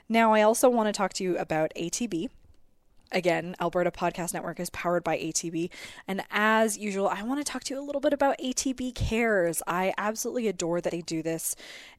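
At 10.88 s the speech jumps forward, a case of compressed frames skipped. A short run of whole coded frames, each about 26.1 ms long, never reaches the output, either because they were missing or because the decoder rejected them as corrupt. Roughly three frames, something like 70 ms of audio, simply vanish. Because adjacent frames overlap, the splice comes out as a quick smeared blip and a slight lurch in timing, not a sharp click.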